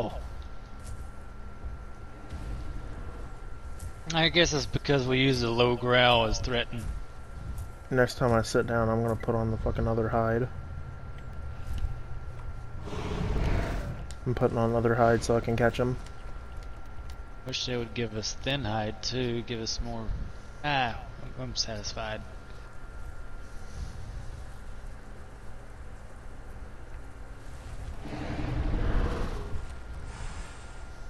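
From 11.33 to 18.51 s, periodic USB or driver dropouts appear. About seven brief gaps of roughly 2 ms silence recur every 1.024 s, heard as regular ticks.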